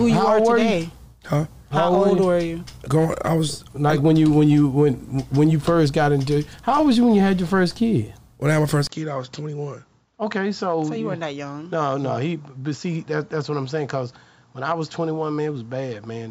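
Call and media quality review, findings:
Input likely switched to a poorer device at 8.87 s: 20 ms gap, band capped at 7.6 kHz, about 5 dB quieter, new low noise floor thereafter.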